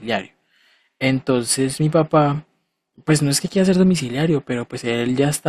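Nothing faulty is audible anywhere in the speech recording.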